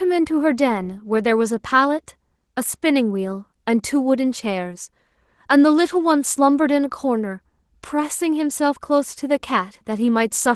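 From start to finish the speech carries Opus voice compression, and it's plainly audible. The low band is coded by linear prediction with a coarse excitation, giving a hoarse, slightly robotic edge, while a thin layer handles the top end. That fits a rate around 16 kbps.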